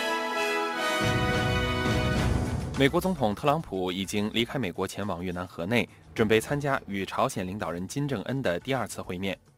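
Nothing in this audio stood out as a technical fault on listening.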